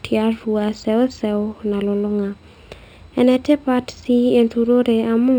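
From start to finish the speech carries imaging from linear upsampling. It was raised from 12 kHz to 48 kHz by joining samples with straight lines, a weak filter that dulls the top of the original band near 6 kHz and leaves a faint mirrored copy of it from 6 to 12 kHz, roughly 35 dB down. On a spectrogram that copy appears as a pale reflection above 6 kHz. It adds a light metallic shimmer to sibilants.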